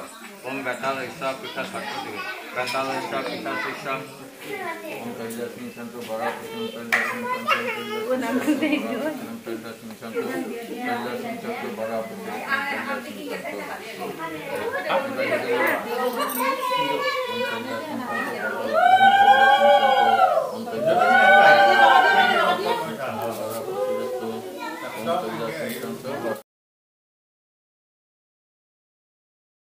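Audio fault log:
throughout: low bit depth without dither. The signal was likely reduced to very few quantisation steps with no dither added, a grain that fits roughly 8-bit rounding. The rounding error moves with the waveform, so it sits roughly 30 dB below the signal as a grainy distortion whose texture shifts with the sound. Quiet passages turn gritty, and the faintest parts break up or sputter between adjacent levels.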